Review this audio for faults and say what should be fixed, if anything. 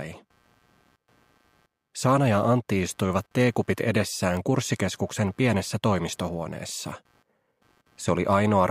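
Computer activity noise runs throughout the clip: a faint buzzing at around a hundred pulses per second, roughly 40 dB below the sound. It rises and falls with the computer's processor, graphics or mouse load, not with the audio, because those load changes disturb the audio circuit's shared ground. To prevent it, use an external or USB-isolated audio interface or a ground-loop isolator so the converter's ground is kept apart from the computer's switching currents.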